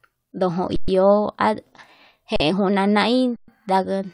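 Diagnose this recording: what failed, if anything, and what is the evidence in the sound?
The failure is at the driver or buffer stage: an underrun with held sample, three times. The speech freezes at 0.76 to 0.88 s, 2.36 to 2.40 s and 3.36 to 3.48 s, gaps of 120, 40 and 120 ms. The output buffer ran dry, and the converter held its last sample as a flat, steady level. The sound simply stops, with barely a click. Nothing is missing afterward. Playback resumes where it paused, so each restart is soft.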